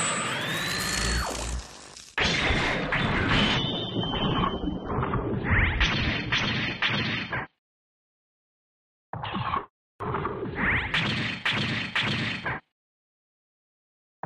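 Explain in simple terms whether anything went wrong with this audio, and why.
Adaptive stream at a lower bitrate, from 3.55 to 7.55 seconds. For these four seconds the sound suddenly turns duller and smeared, then snaps back to full clarity, with no gap at either change. This happens when a streaming player senses the connection slowing and switches to a smaller, more heavily compressed copy of the audio. That copy drops everything above 6.3 kHz and adds compression artefacts until the connection recovers.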